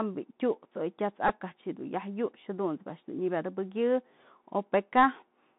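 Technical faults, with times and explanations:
Throughout: Bluetooth CVSD headset codec. The band runs only from about 150 Hz to 3.7 kHz, and the one-bit up/down coding, which fits a 64 kbit/s link, can't keep pace with sharp high content. So sibilants come out scratchy, and a grainy hiss sits under the speech.
1.28 to 1.31 s: Bluetooth headset packet repeated. About 11 ms of audio went missing, which fits roughly three lost voice packets. The chip replayed the previous packet each time, so that brief stretch repeats every 3.75 ms, giving a short buzz near 267 Hz before clean packets resume.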